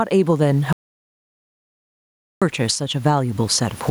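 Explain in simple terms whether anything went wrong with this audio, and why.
Two things went wrong in this speech recording.

The first is gain pumping, and it lasts the whole clip. Loud and soft parts end up closer in level, and the sound is squashed. This is likely because the level was set far too high and a fast limiter kept pulling it back.

The second is an audio dropout to silence from 0.73 to 2.42 seconds. For about 1.7 seconds the sound stops completely, with even the room noise gone. Whatever was said then is lost. The likely cause is the input cutting out briefly.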